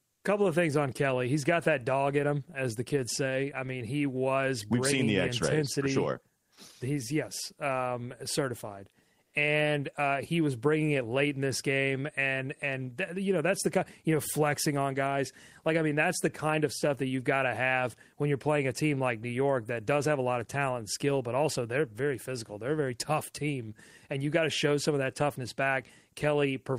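Speech, with two short patches where comfort noise replaces the background, at 0.13 to 0.23 s and 9.23 to 9.33 s, each 100 ms long. The real room tone, sitting about 52 dB under the loudest parts, briefly turns into a flat, featureless hiss, about 4 dB quieter the first time and about 4 dB louder the second. That's likely discontinuous transmission in Opus, with the receiver synthesizing filler noise during the pauses.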